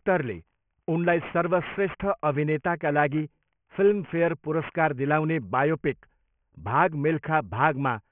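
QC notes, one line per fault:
Throughout, aliasing: speech downsampled without filtering, fitting a 6 kHz rate; energy above 3 kHz folds back as gritty false tones about 20 dB down.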